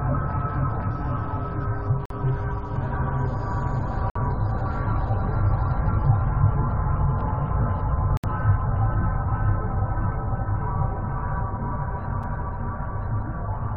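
The audio drops into hard-edged silent holes at 2.06, 4.10, 8.17 and 12.23 s. They last 47, 55, 66 and 5 ms. These are gaps between stream segments. The time stamps of the 2-second segments do not meet, and the player pads each gap with silence. No audio is lost.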